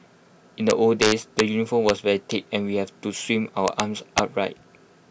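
Integer overflow hits the speech four times: from 0.70 to 1.40 s with the signal driven about 5 dB past full scale, at 1.89 s by about 1 dB, from 3.68 to 3.80 s by about 4 dB, and at 4.18 s by about 5 dB. Instead of being limited, peaks beyond the largest integer wrap to the opposite extreme, so each overshoot becomes a full-range jump. This produces violent cracks on loud syllables, far harsher than clipping.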